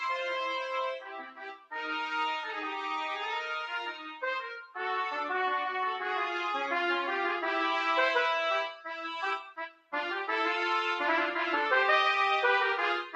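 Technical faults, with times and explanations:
Throughout: noise suppressor applied to music or sounds. A speech-tuned suppressor treats sustained sound and tails as noise, so the level swings by a few decibels.
0.97–1.73 s and 9.40–9.93 s: sound cut by the noise suppressor. Sustained sound sinks by up to about 18 dB while onsets survive.
3.93–4.23 s and 4.61–4.77 s: sound cut by the noise suppressor. Briefer dips of up to about 12 dB hollow out held portions while sharper attacks pass largely intact.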